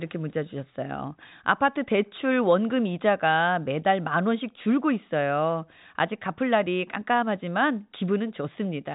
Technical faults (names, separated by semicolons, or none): none